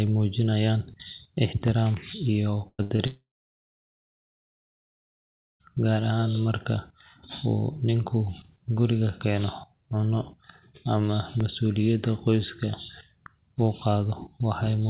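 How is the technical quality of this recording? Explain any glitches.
The recording has several network and playback glitches clustered near the start, on a narrowband call path that leaves nothing above 4 kHz, consistent with G.711 mu-law.

Blocks of digital silence occur at 1.68 s (under 1 ms) and at 11.40 s (about 2 ms). The signal jumped to zero and back with no fade. Each gap is heard as a tick or dip rather than an audible hole.

Bursts of packet loss follow, from 2.68 to 2.81 s (about 100 ms lost) and from 2.83 to 2.92 s (80 ms lost). The receiver extended the last speech sound to cover each gap, fading it down. In the first burst that fill runs out into 40 ms of silence. The result is a held buzz or fading hiss, then a jump forward past the missing speech.

A short concealed packet loss from 2.96 to 3.00 s removed 20 ms. The decoder patched it with a continuation of the preceding sound and blended back in, leaving a brief smear or wobble.

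From 3.06 to 5.62 s comes a long network dropout, the likely cause of a 2.54 s stretch where the speech never arrives. The concealed sound dies away within a fraction of a second, leaving about 2.4 s of silence before speech resumes further on.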